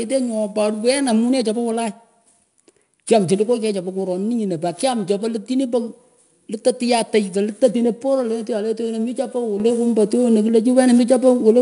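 A speech recording carrying 4-bit ADPCM compression from start to finish. Every louder syllable brings a gritty, level-tracking hiss, and consonant onsets sound rough where the adaptive step size lags behind sudden rises. On a spectrogram this appears as a broadband noise haze that brightens and fades with the speech energy, with nothing above about 10.6 kHz. That ceiling and the plainly audible coding damage suggest 4-bit samples at roughly a 22 kHz rate, near 89 kbps. At 9.60 s a sudden gain jump lifts both the speech and its background noise by about 7 dB in a single step that holds to the end of the clip. It is likely due to a digital gain setting or bit shift applied without a ramp. On the waveform the envelope steps abruptly taller at that instant, and the spectrogram shows the whole band, noise floor included, brightening at once along a sharp vertical edge.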